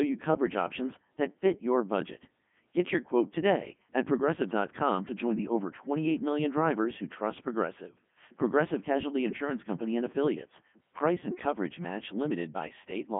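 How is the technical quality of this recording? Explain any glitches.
Poor: the whole recording has passed through a Codec 2 vocoder, with heavy damage. Throughout the clip the speech sounds robotic and buzzy, because the decoder rebuilds it from sine waves driven by pitch, voicing and energy rather than keeping the waveform. The sound is confined to roughly 150 Hz to 3.5 kHz, with nothing above 3.7 kHz, which fits Codec 2's top 3.2 kbit/s mode. Unlike ordinary low-bitrate coding, which smears or warbles a real waveform, this sounds synthetic and mechanical.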